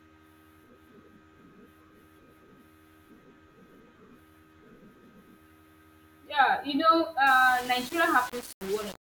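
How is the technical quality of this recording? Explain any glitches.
The recording has one clear fault, confined to its final stretch.

From 7.27 s to the end of the clip, the speech turns grainy and harsh, with a distortion that rises and falls with the signal, sitting around 20 dB below it. The likely cause is low bit depth without dither: the samples were rounded to very few levels, which fits about 5 bits. Because undithered rounding error tracks the waveform, the quieter parts of the speech come out gritty and unstable rather than masked by steady hiss.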